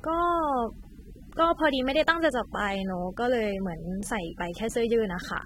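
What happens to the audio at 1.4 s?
At 1.4 s the speech carries the same damage heard across the whole clip: a dull, smeared quality with a warbling, fizzy texture on sustained sounds and sibilants, and nothing above 16.6 kHz. The likely cause is AAC compression, AAC-LC at a low bitrate of roughly 27 kbps, coarsely quantising each frame's frequency lines and leaving spectral holes. Unlike a plain low-pass filter, which would only dull the top, this adds swirling artefacts within the remaining band.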